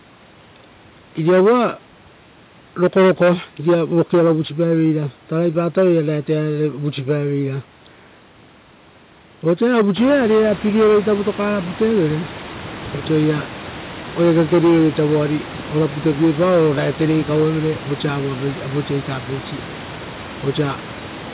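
Nothing in this speech recording stood out as a technical fault on listening.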